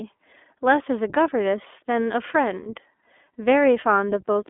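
Throughout the speech the sound is thin and slightly rough and synthetic, confined to a narrow telephone band of roughly 250 Hz to 3.5 kHz. That points to the iLBC codec, coding each 20 ms frame independently at a rate fitting its 15.2 kbps mode.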